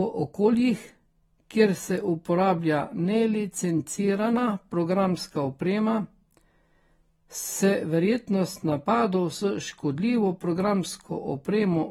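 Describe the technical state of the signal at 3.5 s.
At 3.5 s the speech carries AAC compression damage that runs through the whole clip. It is plainly audible as a dulled, smeared quality with a fizzy, warbling texture on sibilants and held sounds. Nothing is present above 19.3 kHz. The likely cause is AAC-LC coding at a low rate, which fits roughly 45 kbps: the encoder quantises each frame's spectrum coarsely against a hearing model, leaving gaps and roughness in the detail.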